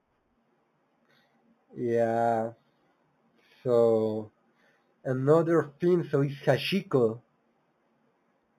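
Throughout the speech, imaging from linear upsampling dulls the top and leaves faint mirrored copies around 4 to 8 kHz, fitting an 8 kHz source; unlike aliasing, nothing folds downward.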